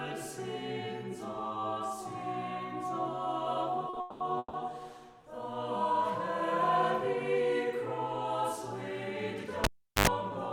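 From 3.89 to 4.55 s the audio shows repeated stalls, a stutter. Packets arrived late or too slowly, so the jitter buffer ran dry four times. Each time, the receiver stretched the last sound to cover the wait, fading it during the longer gaps. Together the gaps fill 400 ms, the longest 200 ms. That is about 61% of the span. Nothing is lost. The sound simply drags and catches.

From 9.64 to 10.07 s a cable is pulled and plugged in. A pop marks the break. Near silence follows for about 384 ms. As the plug goes back, only its tip touches at first, letting in a burst of 50 Hz mains buzz lasting about 86 ms. A second pop follows as the signal returns.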